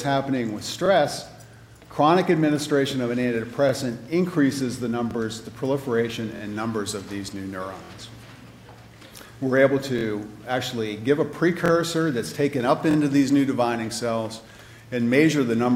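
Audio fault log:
0.86–0.88 s, 3.69–3.72 s, 5.11–5.13 s: repeated buffer. A brief stutter, as one 23 ms slice of sound plays twice with a hard join. Fresh audio arrived late, so the device replayed its last block, which fits a 1024-sample buffer.
6.36–6.41 s, 7.85–7.90 s, 9.99–10.03 s, 11.66–11.70 s, 12.91–12.96 s: repeated buffer. A longer stutter, with the same 23 ms slice heard three times in a row, each with a hard join. The late-data repeat happened twice over before new audio arrived.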